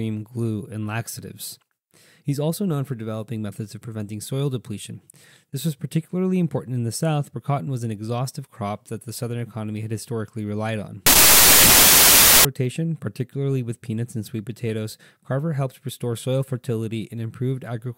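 The audio carries a burst of samples built from the wrong bytes from 11.06 to 12.45 s. Each sample's bytes are assembled in the wrong order or offset. The fast-changing low bits become the large part of each value. The result is loud, harsh broadband noise.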